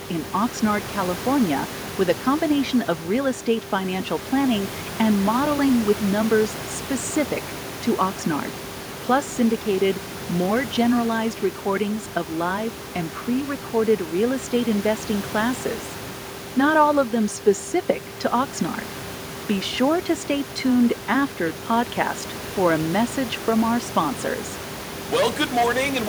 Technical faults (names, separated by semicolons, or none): none